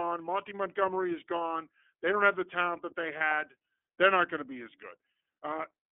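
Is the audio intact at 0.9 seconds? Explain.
No. At 0.9 s the iLBC codec is at work, as it is throughout the clip. It codes each 30 ms frame of excitation independently of the one before, so the sound has a rough, synthetic texture that is plainly audible. The band is squeezed to roughly 250 Hz to 3.4 kHz, which removes the low body and the high detail. The sound is consistent with the codec's lower-rate 13.33 kbps mode.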